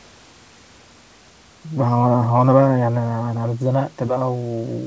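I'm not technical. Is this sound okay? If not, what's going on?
Yes, nothing is wrong here; it's simply speech carried over an ordinary call line, with only the faint background noise of the room it was recorded in.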